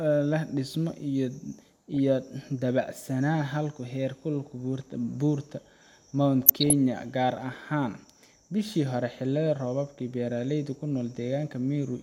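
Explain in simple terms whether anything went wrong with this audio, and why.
Two short bursts of DAB burbling interrupt the speech, at 1.94 to 1.97 s and at 6.42 to 6.73 s, just before "gaar ahaan". The sound briefly breaks into short blips of noise over the speech. The radio signal was weak, so some digital errors slipped past the receiver's error correction. Parts of the sound data came out wrong, putting blips of noise into narrow slices of the pitch range. The second burst is longer.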